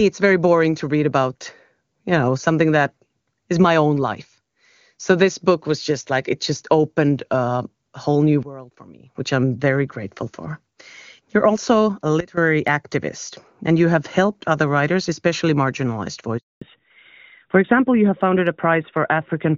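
A sudden gain jump occurs at 8.43 s, where the level drops by about 17 dB until 9.15 s, and again at 12.20 s, about 16 dB down until 12.37 s. Both the speech and the background noise fall and recover together, abruptly rather than smoothly, with no fade in either direction. That points to a digital gain change applied from one sample to the next, most likely a level setting switched in without a ramp.

A handover gap follows at 16.38 s. The speech dies away within a few tens of milliseconds and stays silent for 240 ms, until 16.61 s. This is the sound of a call being moved between networks while no speech frames arrive, so nothing said during that stretch survives. The break is a clean hole in the sound.

Fallback to narrowband takes over from 16.61 s to the end. Before this point the speech carries the full wideband range of the HD Voice codec, and at that quality it sounds clear, consistent with a rate around 23.85 kbit/s. 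After the gap, everything above 4 kHz is gone. The speech turns duller and rougher, which fits a drop to the older narrowband AMR codec at around 12.2 kbit/s.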